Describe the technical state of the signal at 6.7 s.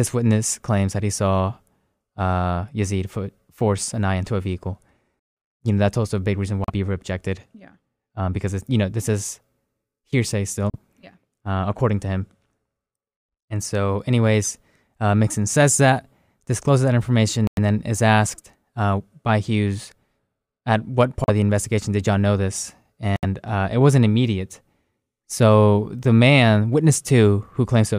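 From 6.64 to 6.70 s there is a Bluetooth stall: the speech cuts to 38 ms of silence, then resumes. The waveform shows a flat gap, and the spectrogram shows a blank vertical strip. Interference likely delayed packets until the headphone buffer ran dry.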